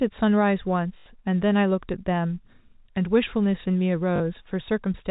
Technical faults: packet loss with last packet repeated

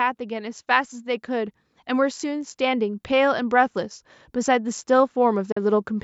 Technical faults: automatic gain rising; Bluetooth dropout

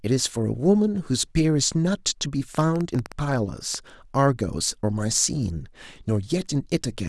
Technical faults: train of clicks

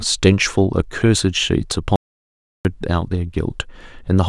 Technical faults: audio dropout to silence

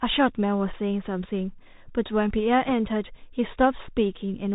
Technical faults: Bluetooth CVSD headset codec; bit errors on a Bluetooth voice link

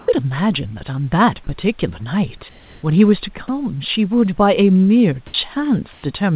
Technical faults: comfort noise in place of the background; sound dropped by the voice detector

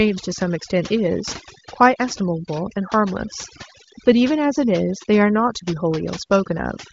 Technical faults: overdone noise removal

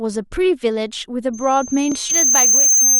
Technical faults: loudspeaker feedback squeal; block of digital silence; stream segment skipped

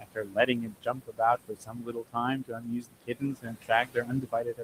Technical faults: noise suppressor artifacts; speech cut by the noise suppressor

